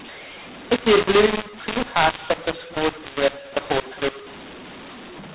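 Speech over a telephone channel, band-limited below 4 kHz, which fits 8 kHz G.711 mu-law coding. Throughout, mu-law and A-law are mixed up. Samples written as mu-law are read as A-law, so levels are scrambled and the voice sounds harsh. Pauses fill with hiss. The waveform shows jagged, wrongly scaled peaks and no flat silences, and the spectrogram shows broadband noise smeared across the gaps.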